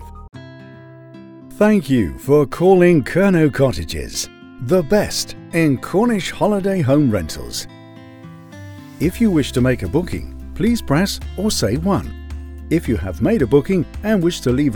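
No technical faults can be heard anywhere in the clip. Nothing in the audio interrupts, distorts or drops out at any point.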